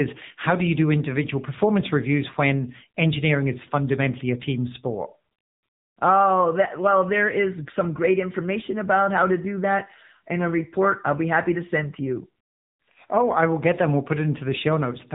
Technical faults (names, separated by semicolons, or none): AMR narrowband mobile codec